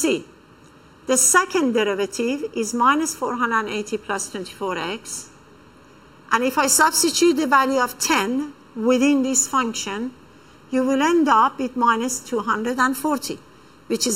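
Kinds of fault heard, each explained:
Channel delay (comb filtering): one channel lags under a millisecond; summed to mono, it cancels around 700 Hz and upward in fixed notches, unlike flanging's moving sweep.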